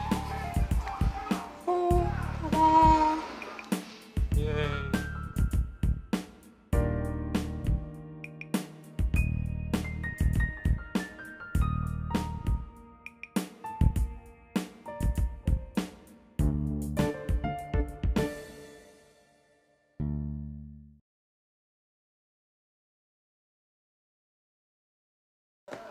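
No technical faults occur at any point in the audio.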